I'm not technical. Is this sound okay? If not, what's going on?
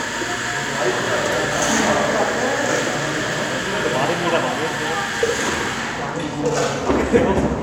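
Yes, this sound is okay, and nothing is going on with it that needs fixing.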